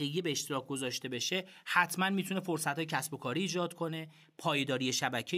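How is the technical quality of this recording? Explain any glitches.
Nothing stood out as a technical problem on listening to this speech recording.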